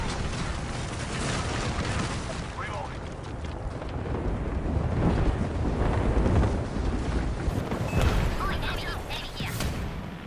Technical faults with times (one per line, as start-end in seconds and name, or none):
7.49-10.26 wrong sample rate